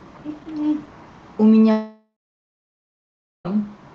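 From 1.71 to 3.47 s the speech gives way to a fading buzz, then about 1.3 s of silence. This is a long network dropout, likely, not a brief glitch, and the lost stretch never returns.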